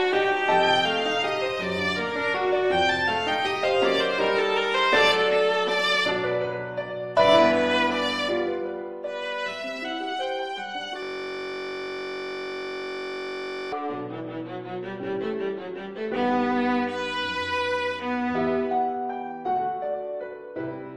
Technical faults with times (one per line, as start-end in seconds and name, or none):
11.03-13.72 system hang loop